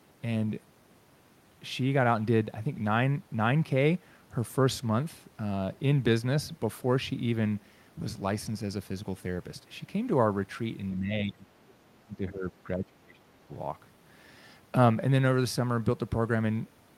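From 10.98 to 13.49 s the speech is pulled down hard, by roughly 25 dB at its deepest, for about two seconds in total. This is speech suppressed in double talk, likely an echo canceller attenuating the near talker while both ends spoke at once.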